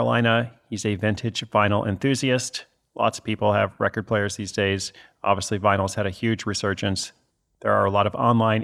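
No technical faults can be heard anywhere in the recording.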